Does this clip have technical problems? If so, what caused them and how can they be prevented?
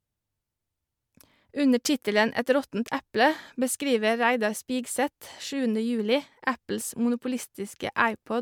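No, there are no technical faults to point to in this speech recording. With nothing going wrong, there is no cause to trace and nothing that needs preventing.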